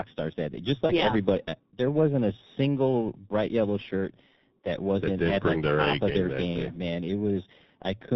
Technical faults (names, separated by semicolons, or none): G.723.1 codec; VoIP packet loss concealed by the speech codec